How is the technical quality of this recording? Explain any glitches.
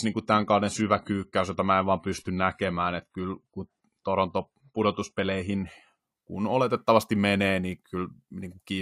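The recording has one glitch, an adaptive stream starting at a low bitrate. From 0 to 6.0 s the speech has nothing above 11.5 kHz and stronger codec artefacts. The player began on a cheap version to start quickly, which fits AAC at 32 kbit/s. At 6.0 s it steps up, likely to 96 kbit/s, and the treble returns suddenly, with no gap.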